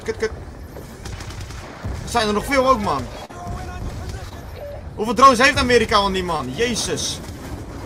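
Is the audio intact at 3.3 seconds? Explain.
No. A short concealed packet loss runs from 3.25 to 3.31 s, where about 40 ms of the stream failed to arrive in time for decoding. The receiver patched the gap by extending the preceding sound, carrying its pitch forward if it was voiced or substituting shaped noise if not, then crossfaded back into the real signal. At that moment you hear a brief smear or wobble, and a short consonant there may be lost.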